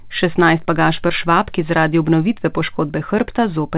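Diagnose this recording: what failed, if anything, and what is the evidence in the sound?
A short concealed packet loss at the network stage, between 1.08 and 1.11 s. For about 20 ms the audio never arrived in time, and the receiver covered roughly 13 ms of that gap by extending the preceding sound before crossfading back into real audio. The result is a brief smear rather than silence, which distinguishes it from a hard dropout or a buffer underrun click. This speech travels a narrowband call path, with nothing above 4 kHz, consistent with G.711-style telephone coding.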